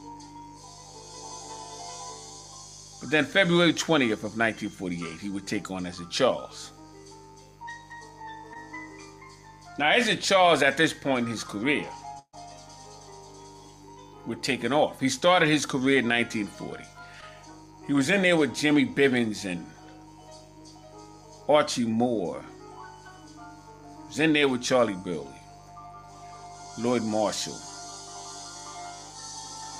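A mains buzz runs under the whole clip, sitting roughly 30 dB below the signal. It is built on 50 Hz, and its harmonics climb into the kilohertz range, giving a steady, raspy edge rather than a smooth hum. That spectrum comes from sharp switching spikes entering the chain twice per mains cycle, as from a dimmer, a rectifier or an unshielded lead, so the interference is spiky rather than sinusoidal.

At 8.53 to 8.57 s there is a short concealed packet loss. About 20 ms of audio never arrived in time. The receiver bridged roughly 16 ms of it by extending the preceding sound and then crossfading into the real signal, which leaves a brief smear or wobble. The same happens at 17.21 to 17.24 s, where the gap is again 20 ms and about 11 ms was patched, giving an equally short glitch.

The longest event, at 12.19 to 12.35 s, is a burst of packet loss. Around 140 ms of audio is gone. The decoder carried the last sound forward for about 137 ms, letting it decay, so it comes across as a held buzz or fading hiss. 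Around 60 ms of that stretch drops to silence before the signal resumes further along. The material that belonged in the gap is missing, so the sound jumps ahead where it resumes.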